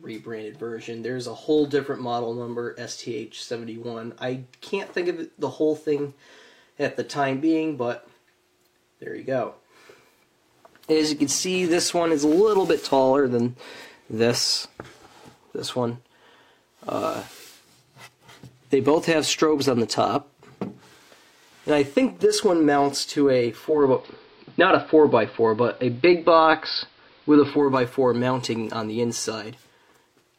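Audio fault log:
23.58–27.80 s, digital radio blending to analogue: the receiver loses the digital stream and cross-fades over about 324 ms to the AM broadcast, so hiss rises to roughly 35 dB below the signal, and the level shifts by about 4 dB.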